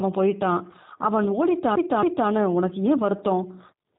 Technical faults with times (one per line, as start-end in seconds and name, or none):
0.00-3.98 G.729 codec